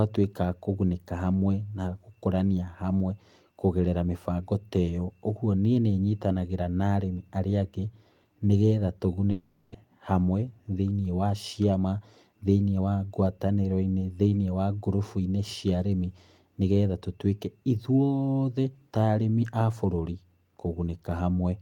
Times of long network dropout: 9.31-9.76

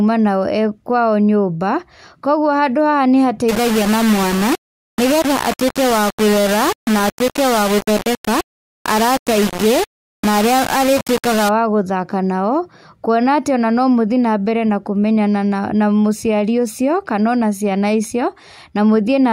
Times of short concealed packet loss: none

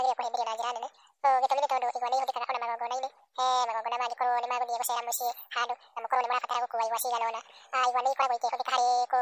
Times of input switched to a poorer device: none

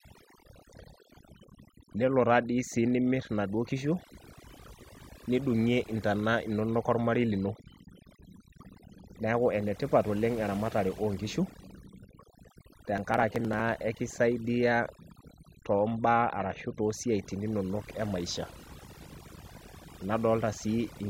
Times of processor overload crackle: 12.98-13.60

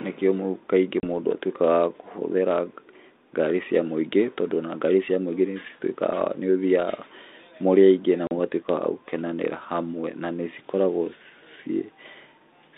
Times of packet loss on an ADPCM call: 1.00-1.05, 8.27-8.32

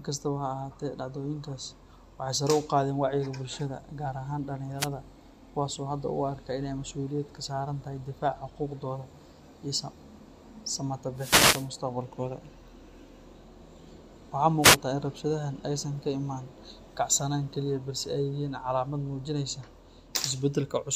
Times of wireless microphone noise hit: 4.78-4.88, 11.15-11.70, 14.61-14.77

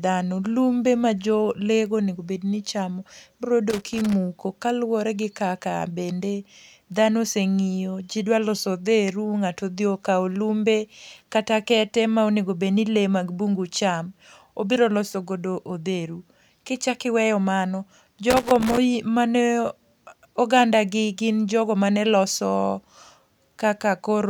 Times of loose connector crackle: 3.70-4.13, 18.30-18.78

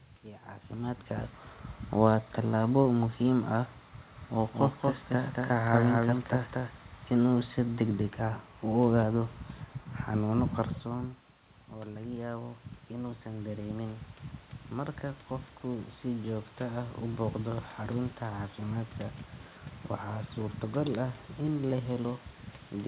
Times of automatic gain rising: 10.83-17.72

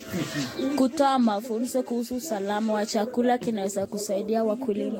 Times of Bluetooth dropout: none

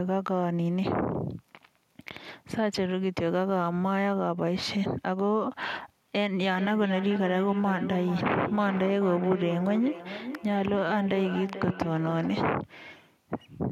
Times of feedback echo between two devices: 6.52-12.66

